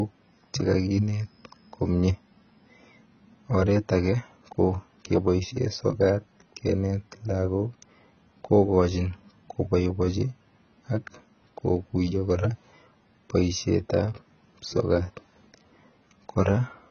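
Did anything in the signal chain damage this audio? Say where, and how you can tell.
Yes. The damage sits at the codec stage, likely AAC compression at a rate consistent with about 16 kbps. Throughout the speech nothing survives above 6.7 kHz, and the heavy coarse quantisation of frequency lines leaves the sound dull and smeared, with a warbling, fizzy texture.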